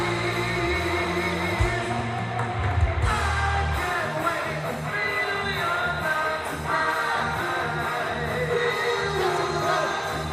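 A short, sharp blip at 1.32 s, a brief chirp of misplaced energy that cuts in and vanishes almost at once, peaking around -20 dBFS. It is a corrupt frame decoded: bits inside what sounds like a single compressed frame were flipped, yet the decoder played it anyway. The damaged gains and misread spectral codes scattered energy into the wrong frequencies for just the length of that one frame.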